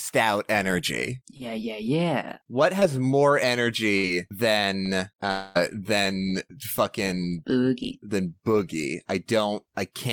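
At 1.37 to 1.42 s, between "out energy" and "yeah yeah", and again at 2.80 to 2.83 s, there is short concealed packet loss. In each case about 20 ms of the call arrived too late for the decoder, and the receiver covered the hole by extending the preceding sound before blending back into the real signal. Each gap is heard as a brief smear or wobble in the speech, and some of what fell inside it is gone.

From 3.97 to 4.05 s a burst of packet loss takes out about 60 ms. The receiver again continued the last sound, lowering its level as the gap went on, and then resumed further along. This leaves a short held buzz or fading hiss in place of real speech, followed by a jump where that stretch of audio never arrives.

Between 5.31 and 5.57 s, roughly a quarter of a second of speech is replaced by a continuation of the previous sound that fades as it goes. It never drops to full silence before the real audio returns, and the speech picks up later, without the portion that was lost. 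This is likely a long network dropout: nothing reached the receiver for that stretch, so it had to fill the whole gap by itself.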